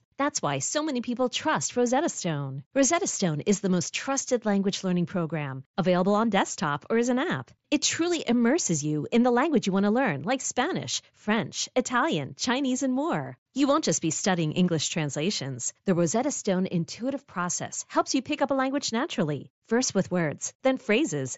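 No technical faults can be heard anywhere in this recording.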